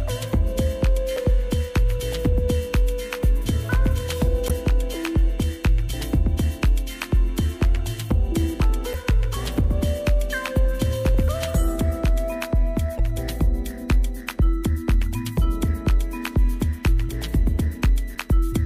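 Damaged data in a compressed stream causes brief blips at 1.14–1.18, 4.46–4.51, 8.91–8.95, 12.96–13.00 and 18.13–18.17 s. Corrupted frames break decoder sync, producing a chirp, squawk, click or short hole.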